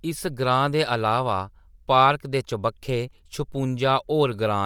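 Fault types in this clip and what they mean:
Bluetooth LC3 compression: the speech carries a plainly audible grainy, breathy edge throughout, likely from LC3 coding in 10 ms frames, fitting around 48 kbps, with highs topping out near 20.2 kHz.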